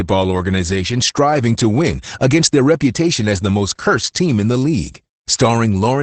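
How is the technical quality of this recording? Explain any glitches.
Quality is noticeably degraded by Opus voice compression throughout the clip. The SILK coder runs at a low rate, roughly consistent with 12 kbps. It codes the excitation coarsely and removes everything above about 8.8 kHz, so the speech sounds muffled, slightly hoarse and faintly robotic from start to finish.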